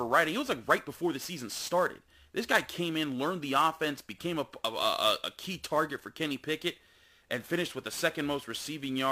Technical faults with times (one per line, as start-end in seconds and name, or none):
0.00-9.11 sample clock jitter